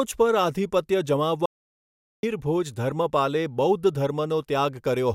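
At 1.46 s, just after "પર આધિપત્ય", the speech cuts out abruptly. This is an audio dropout to silence. The gap runs until 2.23 s, about 0.77 s. It is silence, with no room tone or hiss underneath. The input was likely lost for a moment while the recorder kept writing zeros. Speech then resumes mid-flow. Whatever was said in that stretch is gone.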